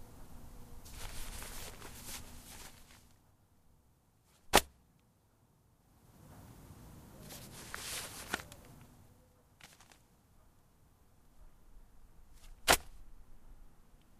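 Zipper noise runs from 2.28 to 3.37 s, where the level is pulled down by roughly 15 dB in 2 dB steps rather than as a continuous glide. Each jump lands abruptly with no smoothing between values, so every step puts a small click into the waveform. At around seven steps per second, those clicks form an audible ticking, a zipping texture laid over the sound while it fades.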